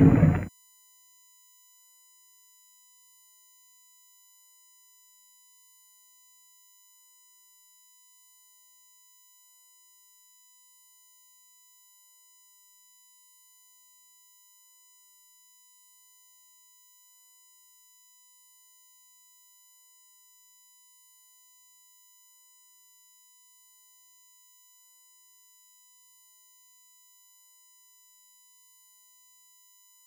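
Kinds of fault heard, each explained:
USB whine: A steady whine of fixed pitch runs under the audio for the whole clip. It rests on a 1 kHz tone with a series of harmonics above it, the strongest at 7 kHz, roughly 25 dB below the signal. The USB bus draws current in 1 ms frames, and that 1 kHz pulsing leaks into the audio path through the shared power supply or ground. The interference therefore lands at the frame rate and its multiples.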